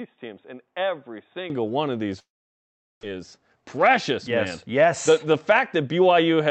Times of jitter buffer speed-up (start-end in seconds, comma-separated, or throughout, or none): 3.12-5.27